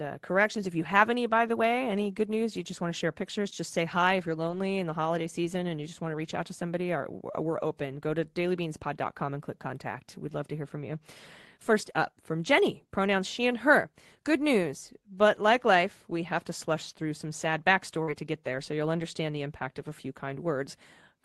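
At 18.03 s, roughly 40 ms of the call failed to reach the decoder in time, a short concealed packet loss. The receiver covered the hole with about 43 ms of invented sound, carrying the last stretch of speech forward from its pitch or, for unvoiced parts, as shaped noise, before cross-fading back into real audio at 18.09 s. The result is a brief smear or wobble in the speech, and a quick consonant inside that window may simply disappear.

Overlapping the end of that gap, from 18.07 to 18.09 s, one lost packet was recovered as a lost packet rebuilt from error correction. The packet that followed carried a low-bitrate duplicate of it through Opus in-band forward error correction, so the decoder played that copy instead of concealing it. These 20 ms do not drop out, but they sound coarser and noisier than the speech around them, against the Opus coding at 24 kbps with a 12 kHz bandwidth heard throughout.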